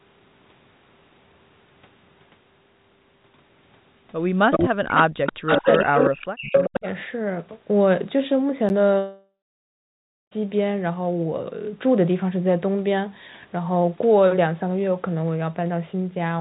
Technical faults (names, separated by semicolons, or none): echo leak; speech suppressed in double talk; block of digital silence; long network dropout